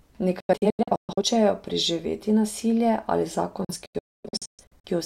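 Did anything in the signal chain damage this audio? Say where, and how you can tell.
Yes, a digital broadcast dropout at the receiver. The speech breaks into short silent holes from 0.40 to 1.22 s, before "preživeti nasilje", and from 3.65 to 4.89 s, with gaps up to 128 and 256 ms. Each cuts to silence within 3 ms, as muted bad frames do, unlike concealment's smeared repeats.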